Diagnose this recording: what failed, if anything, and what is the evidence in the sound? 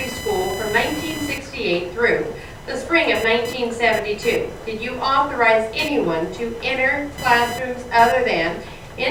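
A buzzing, chirping whine sits under the sound from start to finish, with a pulse rate of roughly 1 kHz and a level around 15 dB below the wanted signal. This is computer activity noise, a fault in the analogue wiring stage: load swings in the processor, graphics card or mouse push current through the ground shared with the audio circuit, and that ground movement is added directly to the sound.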